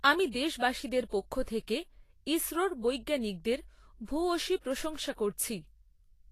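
Throughout the speech, the treble is grainy and hissy and nothing sounds above 14.2 kHz, which points to Vorbis compression at around 32 kbps as the likely cause. Coarse treble quantisation swaps fine detail for noise, roughening sibilants, unlike a plain low-pass filter, which leaves the remaining treble clean.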